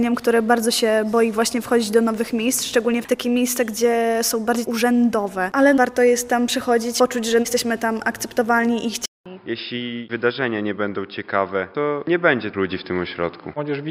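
At 9.06 s a 200 ms gap precedes duller, quieter audio with nothing above 5.2 kHz and new background noise, likely an input switched to a poorer device, not plain filtering.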